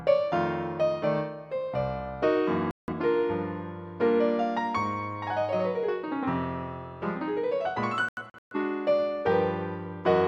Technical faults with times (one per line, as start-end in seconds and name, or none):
2.71-2.93 digital broadcast dropout
8.09-8.56 digital broadcast dropout